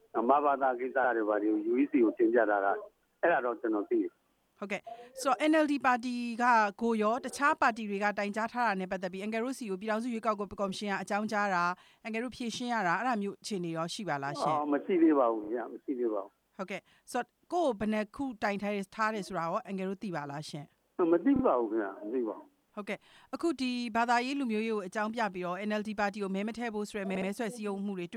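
The audio stutters from repeated frames at 15.44 s and 21.36 s, where a 32 ms block plays twice more, and at 27.15 s, where a 64 ms block does. Unlike a dropout, nothing goes missing: the same fragment recurs, adding 64 to 128 ms.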